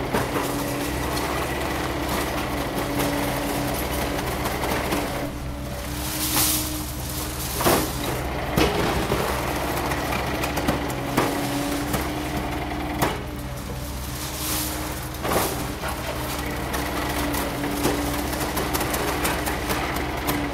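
A recording of sounds in which something blocks the USB bus or audio driver at a steady interval, causing periodic USB or driver dropouts from 18.27 to 20.25 s. Roughly a millisecond is skipped every 0.124 s, around fifteen times, heard as evenly spaced ticks over the sound.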